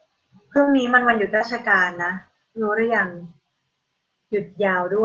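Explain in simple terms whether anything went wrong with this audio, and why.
Two kinds of network damage appear, both in the first second and a half. Short concealed packet loss hits at 0.63 to 0.83 s and at 1.36 to 1.42 s. About 40 ms of sound never arrived, so the receiver invented a stand-in by continuing the previous sound, which gives a brief smear or wobble. Lost packet rebuilt from error correction occurs at 0.67, 0.73, 0.84, 1.00, 1.06, 1.12, 1.24 and 1.40 s, each lasting 20 ms. Here a rougher backup copy filled each hole. Nothing is guessed or missing, so instead of a smear you get a moment of grainier sound.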